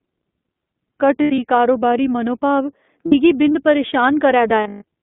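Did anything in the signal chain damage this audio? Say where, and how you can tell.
Yes. At the codec stage, the whole clip sits inside a narrow 200 Hz to 3.6 kHz band, and the speech has that slightly rough, synthetic edge of iLBC. The damage is plainly audible. The rough texture fits the 15.2 kbps mode with 20 ms frames.

Lost iLBC frames on the network side show up three times: 1.22 to 1.39 s, 3.06 to 3.15 s and 4.64 to 4.84 s. Each gap turns into a held, buzzy vowel as the decoder repeats the last pitch cycle with added noise. The third gap is the longest, a near-solid run of about 150 ms. The voice comes back almost immediately after each gap because iLBC frames don't depend on earlier ones.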